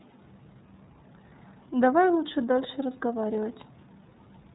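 From start to finish, the speech carries the sound of the iLBC codec. Nothing above about 3.8 kHz survives, so the audio is narrowband and dull. The damage is plainly audible. Each frame's excitation is coded on its own, without drawing on the frame before. That leaves the speech clear but rough and slightly synthetic. The coarseness fits 30 ms frames at roughly 13.33 kbps.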